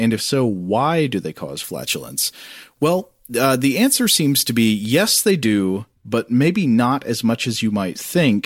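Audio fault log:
1.64–5.31 s, pre-emphasis left on: after "why do they cause", treble runs about 10 dB hot at 10 kHz, consistent with a 50 µs FM boost never de-emphasised; thin, bright, sibilant.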